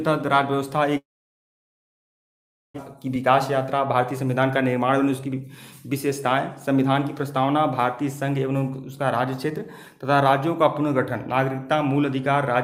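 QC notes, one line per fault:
0.97–2.80 s, long network dropout: Audio likely stopped arriving from the network for about 1.8 s, and roughly 1.6 s of it is never played. Concealment briefly stretches the last sound into a fading buzz or hiss, then leaves near-silence until the audio resumes with that stretch missing.
2.87–5.41 s, jitter buffer speed-up: After the gap, the buffer held around 150 ms more than its target, so the receiver trimmed short pitch-period pieces repeatedly to catch up. The audio plays about 6% fast at unchanged pitch, giving a slightly hurried feel.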